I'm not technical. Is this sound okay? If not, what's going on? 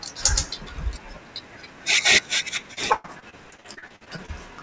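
No. From about 2.74 s to 4.30 s the speech turns choppy and robotic, with little pieces dropping out. This is repeated packet loss (robotic sound). Over that stretch about fifteen bits of audio went missing on their way through the call, the longest about 0.12 s. Each time, the system papered over the hole by stretching the last bit of sound. Roughly a third of that stretch is patched sound rather than real speech.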